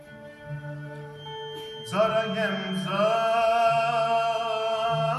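A feedback whistle runs from 1.11 s to the end at 5.18 s: a thin, steady tone at 3.2 kHz, sitting well below the main sound and swelling and fading slowly. It is likely a loudspeaker-to-microphone loop held just at the edge of feedback.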